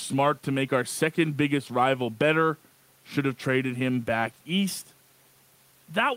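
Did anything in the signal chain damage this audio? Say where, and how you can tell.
No, the speech signal shows no damage from any stage of the chain; its level, continuity and timing hold steady throughout.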